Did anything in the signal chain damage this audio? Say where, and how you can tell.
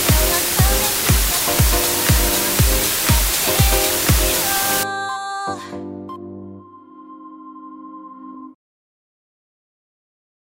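Yes: low bit depth with dither from 0 to 4.83 s, a sample-format conversion fault. The sound was reduced to just 3 bits with dither added before rounding, so the error becomes a steady, even hiss roughly as loud as the sound itself, without any distortion.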